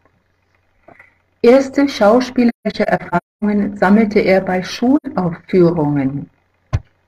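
AAC frame loss with muting hits between 2.48 and 3.44 s, then again at 4.96 to 5.06 s. Missing frames were decoded as silence, so overlapping windows fade the speech into soft-edged gaps: about 0.6 s scattered across the first span, longest about 0.3 s, then an 85 ms hole fitting two frames.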